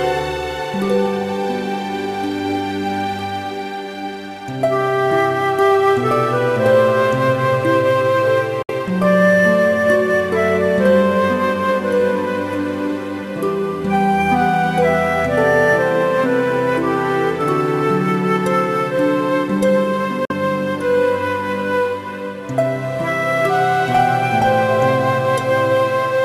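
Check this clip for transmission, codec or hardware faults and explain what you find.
Two brief silences are present, most likely Bluetooth dropouts, at 8.62 to 8.71 s and 20.25 to 20.33 s. Late packets were discarded, so output muted and resumed mid-stream; waveform and spectrogram show sharp-edged blank columns.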